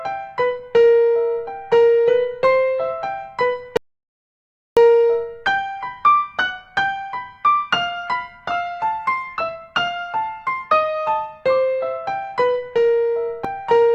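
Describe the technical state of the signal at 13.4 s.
At 13.44 s, damaged data in the compressed stream makes the decoder misread a frame and resync, giving a brief blip, seen as a thin broadband vertical streak and waveform discontinuity.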